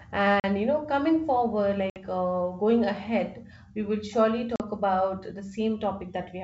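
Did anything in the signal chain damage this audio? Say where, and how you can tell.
Yes, packet loss on an ADPCM call in the network: silent gaps of 40 ms before "you know coming forward" at 0.40 s, 60 ms after it at 1.90 s, and 40 ms between "ahead we will surely" and "about the" at 4.56 s. Each drops a few packets, and the G.722 decoder restarts mistracked, so the speech returns slightly distorted.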